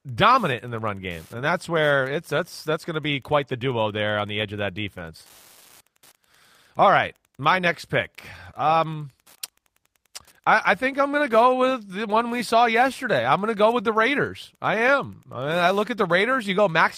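Running under the speech from start to finish there's Wi-Fi interference: a radio sitting close to the audio circuitry, with its beacon rectified into a steady tick every 102.4 ms, so roughly ten clicks a second, sitting around 35 dB below the speech.

There's also clock drift between sender and receiver across the whole clip. The sender's clock is running fast, by something like 5 percent, so the receiver's jitter buffer keeps creeping toward full and has to shed material to keep up.

That shows up as repeated timing corrections from about 0.17 s to 16.78 s. The receiver keeps trimming short pieces to match a sender running at 105 percent. All the edits go the same way but are unevenly spaced.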